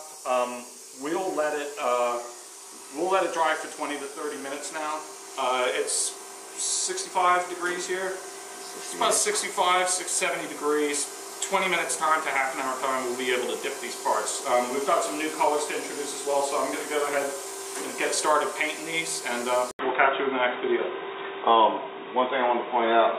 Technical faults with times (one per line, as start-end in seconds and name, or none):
19.71-23.18 input switched to a poorer device